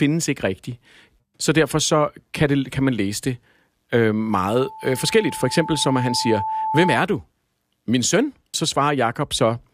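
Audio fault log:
4.30–7.02 s: loudspeaker feedback squeal. Just after "man læse det øh", a single tone near 877 Hz rises out of the speech and swells over roughly three seconds into a squeal that ends up about 5 dB louder than the speech. The microphone is picking up the loudspeaker it drives, and at this one frequency the round-trip gain exceeds unity, so each pass reinforces the tone until it stops at 7.02 s.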